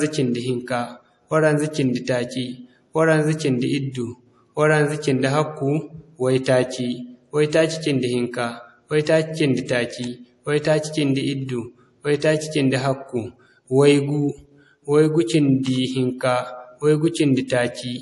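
Across the whole recording the speech carries a watery, swirling quality, with s sounds turning metallic and chirpy, and nothing at all above 11.4 kHz. That hard treble ceiling and the flickering texture point to MP3 compression, likely at a low bitrate around 48 kbps. The encoder runs short of bits, zeroes weak frequency lines that blink on and off between frames, and drops the top band outright. A simple low-pass filter would dull the top end cleanly, without that swirl.

At 15.63 s a brief hiss of about 18 ms creeps in just before a sharp attack, which itself sounds softened. This is pre-echo. The codec spreads quantisation noise evenly across its transform block, so noise sized for the loud onset also fills the quiet gap ahead of it. Unlike a click or dropout, it is a smear arriving early and tied to the attack, not a break in the sound.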